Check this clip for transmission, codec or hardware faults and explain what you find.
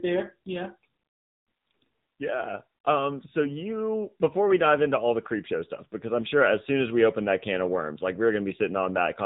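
One codec fault runs through the whole speech clip. AMR narrowband mobile codec: a vocal-tract model at about 8 kbps leaves buzzy, synthetic speech; spectrograms show nothing above 4 kHz.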